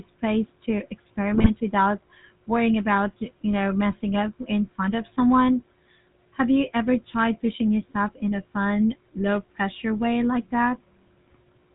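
GSM full-rate codec coloring runs through the whole clip. The speech is rebuilt from a vocal-tract model driven by sparse, regularly spaced pulses, which fits the 13 kbps full-rate coder, and nothing above 4 kHz survives, so the voice sounds plainly buzzy, gravelly and band-limited.

GSM bit errors strike from 1.34 to 1.50 s. Flipped bits corrupt the decoder's filter, pitch and gain values for a handful of frames, bending the spectrum and jolting the level, so the voice breaks into a brief burst of squawking, popping and gargling.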